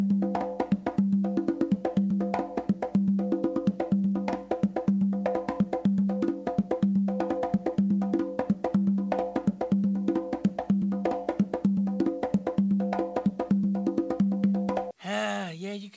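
No technical faults are audible.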